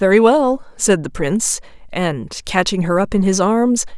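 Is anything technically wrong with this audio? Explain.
No, nothing technically wrong can be heard in this speech recording; the signal stays continuous and stable throughout, with no audible faults.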